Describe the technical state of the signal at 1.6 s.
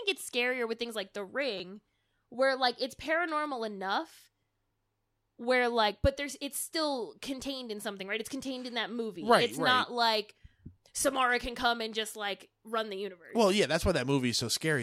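At about 1.58 s there is a repeated buffer. New audio arrived late, so the playback device replayed its last block of about 5.8 ms (which fits a 256-sample buffer) three more times, each with a hard join, and around 20 ms of real audio never plays. Because the block is so short, the repeats fuse into a click or brief buzz rather than an audible stutter. Unlike a dropout, there is no silent gap. The same fragment cycles in place of the missing sound.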